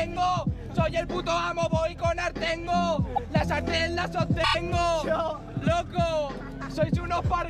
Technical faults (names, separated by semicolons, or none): repeated frames